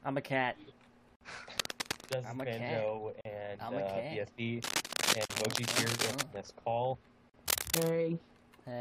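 Separately encoded pieces were joined without trimming the encoder's start delay and final-frame padding, so each join leaves a gap at a join of encoded pieces. The first, at 1.16 to 1.21 s, lasts 53 ms. After it the gaps recur every 2.0 s, at 3.21 to 3.25 s, 5.25 to 5.30 s and 7.30 to 7.34 s, each 43 ms long. The sound drops into silence with slightly smeared, abrupt edges, then resumes exactly where it stopped.

Cable scratch noise appears three times, from 1.58 to 2.15 s, 4.63 to 6.23 s and 7.48 to 7.89 s. The likely cause is a worn cable, connector or control being moved, which makes its contact resistance fluctuate rapidly. The fluctuation injects dense, uneven bursts of scratching and rustling over the sound. In the first burst the noise sits somewhat below the signal, and in the longer second burst and the brief third burst it is about as loud as the signal itself.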